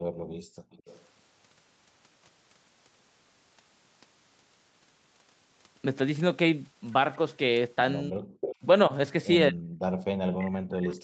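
A speech recording carrying echo-canceller faults from a call. Background gated by the echo canceller, 0.00 to 0.71 s and 9.89 to 10.01 s: the room sound sinks by about 40 dB and about 35 dB respectively, because the canceller clamped the microphone while the loudspeaker played. Echo leak, 0.71 to 1.05 s and 8.41 to 8.56 s: a copy of the voice trails by 214 ms and then 222 ms, about 30 dB and about 10 dB below the speech, likely residue the canceller failed to remove. Speech suppressed in double talk, 8.11 to 8.39 s, 9.50 to 9.61 s and from 10.29 s to the end: the voice drops by around 40 dB, likely because the canceller couldn't separate overlapping talk from echo and attenuated both.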